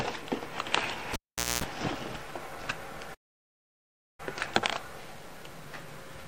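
At 1.13 s a live cable is pulled out and plugged in again, giving a pop, about 0.45 s of near silence, 0.24 s of 60 Hz mains buzz, then another pop at 1.64 s. From 3.14 s the player likely ran out of data in a playback stall, so the sound cuts out mid-flow for about 1.04 s before resuming at 4.20 s.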